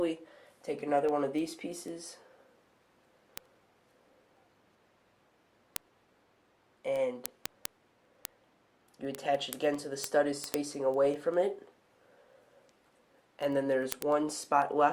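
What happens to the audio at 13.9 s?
At 13.9 s the audio is in the middle of a run of word clock ticks that lasts from 0.19 s to 14.92 s. The receiving device is running on its own clock, roughly 200 parts per million away from the sender's. Each time the two clocks slip past each other, one sample is dropped or repeated and a few neighbouring samples are misread. The result is sharp, uneven clicks at about ten per second.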